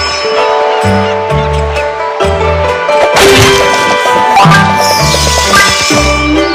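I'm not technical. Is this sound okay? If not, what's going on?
No, it isn't. From start to finish, every loud moment has a harsh, crackly fuzz. This is hard clipping: the sound was pushed far too loud for the equipment, so its peaks, about a tenth of the audio, were chopped flat, adding that rough buzz.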